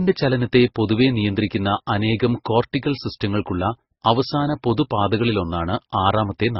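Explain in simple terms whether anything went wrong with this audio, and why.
Throughout the speech, the sound is dull, with nothing above about 5.6 kHz, and carries two different kinds of compression smear at once. That layering, rather than one codec's artefacts, points to transcoding between lossy codecs, likely MP3 re-encoded as Opus.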